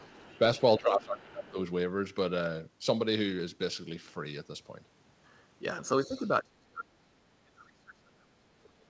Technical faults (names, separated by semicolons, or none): other side's voice leaking through; speech suppressed in double talk